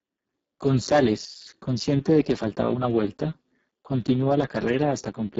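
Throughout the clip the speech carries the signature of the Speex codec at heavy compression. The voice sounds hoarse and grainy, with a buzzy, somewhat robotic edge. The excitation is starved of detail, which fits a very low bitrate of around 6 kbps. Nothing is present above 7.6 kHz. What remains in the upper band is a shaped, noise-like hiss standing in for real consonant detail rather than genuine harmonic content.

From 1.25 to 1.46 s, just before "consciente de que faltaba", the overall level drops abruptly by about 6 dB and then snaps back. This is most likely one channel dropping out of a stereo source ahead of the mono fold-down. The material shared by both channels loses half its contribution for that stretch, so the sound turns briefly quieter.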